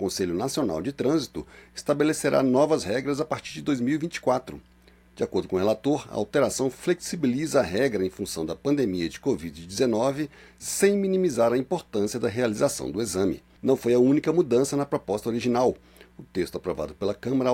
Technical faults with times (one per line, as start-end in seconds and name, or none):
none